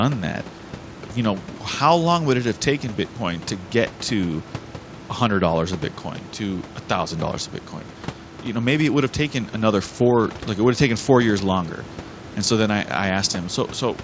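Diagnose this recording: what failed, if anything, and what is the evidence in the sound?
Nothing stood out on listening: the low room noise sits about 19 dB below the speech, and the top end stops at 8 kHz, as expected for a G.722 call path.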